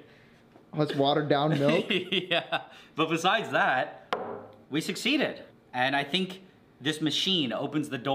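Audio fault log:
No faults heard anywhere in this audio.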